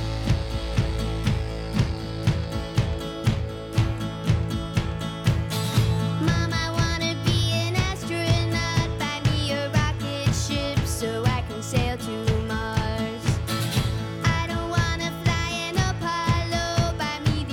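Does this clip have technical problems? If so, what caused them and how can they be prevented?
No, the signal has no technical faults that need a cause explained or a prevention step.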